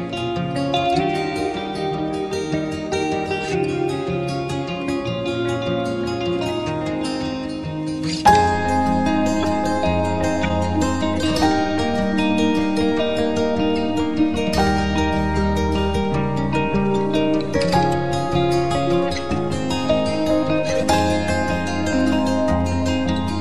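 Three short glitches of corrupt frame decoded at 9.41–9.45 s, 10.43–10.51 s and 13.77 s: damaged frames played anyway, spraying misplaced energy, loudest first, fading later.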